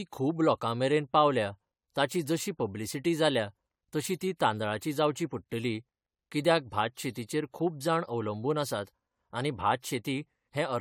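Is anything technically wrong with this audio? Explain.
Yes. Generation loss runs through the whole speech clip: the audio sounds swirly, hollow and smeared, with blurred attacks and nothing above 19.2 kHz. This likely comes from AAC-LC re-encoding around seven times, consistent with 96 kbit/s, each pass requantising on a shifted frame grid. A single encode at that rate wouldn't sound this degraded.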